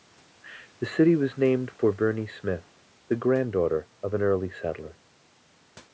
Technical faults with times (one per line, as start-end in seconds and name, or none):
none